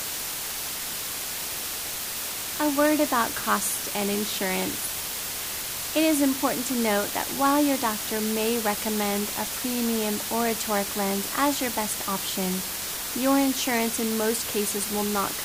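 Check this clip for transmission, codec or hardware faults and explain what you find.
The audio has one fault, low bit depth with dither, present for the whole clip. The sound appears to be held at only about 4 bits, with dither added before each value is rounded. The rounding error therefore becomes steady white noise rather than distortion. The result is a constant, even hiss sitting nearly as loud as the sound itself. On a spectrogram this shows as a uniform grey wash across all frequencies. The waveform carries a thick noise band that never drops out between sounds.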